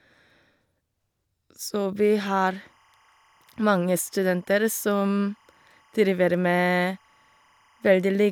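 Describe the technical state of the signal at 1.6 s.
At 1.6 s the signal is intact, with no dropout, distortion, noise or other technical fault to be heard.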